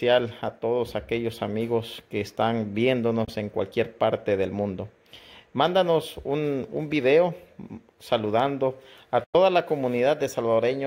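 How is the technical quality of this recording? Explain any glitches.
Two short gaps break the recording, at 3.25–3.30 s and 9.24–9.35 s. Both are a likely Bluetooth dropout: packets missed their delivery window, so output went silent for about 23 ms and then 93 ms, resuming as though playback had continued underneath.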